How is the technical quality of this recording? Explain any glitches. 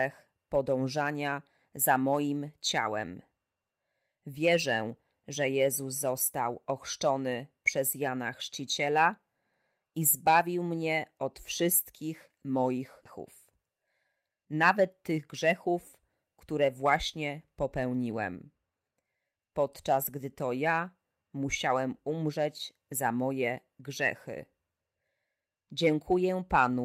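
There are two glitches in this speech, both around the 13-second mark.

At 13.05 to 13.07 s there's a skip ahead. Roughly 0.4 s of speech was dropped, either in transit or by an overflowing jitter buffer, and playback jumps straight to later audio with no filler. The two sides are butted together, so you hear an abrupt splice.

Right after, from 13.2 to 15.3 s, comes a jitter buffer speed-up. The buffer was holding more than it wanted, so the receiver trimmed small pitch-period-sized slices over and over, shaving about 0.2 s in total. Speech runs around 110% speed at unchanged pitch and sounds a bit rushed.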